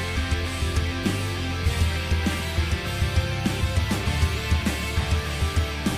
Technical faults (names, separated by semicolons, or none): none